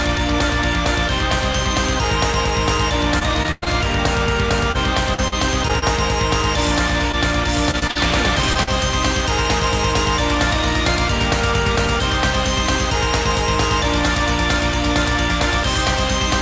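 From 3.19 to 3.68 s comes the first stretch of repeated packet loss with robotic sound. Four gaps arrive in quick succession, the longest about 106 ms, and about a third of that span is rebuilt by stretching the preceding sound. The result is choppy, with pieces missing, rather than silent holes. The same pattern returns from 5.14 to 5.84 s with four shorter gaps of at most 39 ms, filling about a sixth of the span, and again from 7.71 to 7.97 s, where four gaps cover nearly 40 percent of the stretch.

Short concealed packet loss appears as single isolated holes at 4.72, 7.12, 8.53 and 8.63 s. The first three each lose about 20 ms and the last about 40 ms. Each is patched once and blended back, so what you hear is a brief smear or wobble, not the sustained robotic texture that comes from several gaps in close succession.

Throughout, the call path passes nothing above 8 kHz, which fits a G.722 link.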